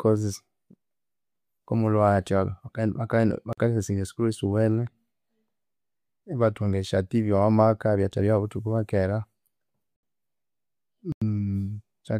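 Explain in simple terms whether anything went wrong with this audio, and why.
The speech drops out in three blocks of digital silence, at 3.53, 9.96 and 11.12 s (about 46, 70 and 93 ms), likely from buffers not filled in time. Abrupt cuts, not fades, set these apart from ordinary pauses.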